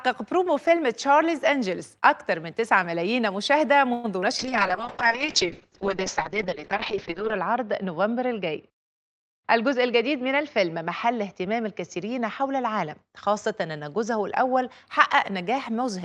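At 3.93 s the sound stalls into a fading buzz for about 0.1 s, likely a call audio freeze from held-up packets draining the jitter buffer, then resumes intact. At 4.2 s there's a short concealed packet loss: a quick smear where about 40 ms never arrived and the decoder patched over the hole. From 4.41 s to 14.93 s a call bitrate drop takes it from 32 to 6 kbps, with bandwidth falling from 20 kHz to 8 kHz, so everything turns muffled and rough. Between 9.04 s and 11.22 s a jitter buffer speed-up trims pitch periods to shed about a tenth of a second, so the audio runs about 5% faster at the same pitch.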